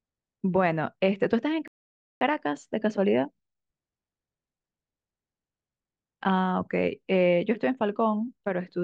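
At 1.68 s the speech cuts off mid-flow and the output falls completely silent for about 0.53 s, resuming at 2.21 s. This is a playback stall: the gap is a dead hole in the output rather than a pause in the speaking. The likely cause is that the player's buffer ran dry, or its playback thread was briefly blocked, so no samples reached the output until it recovered.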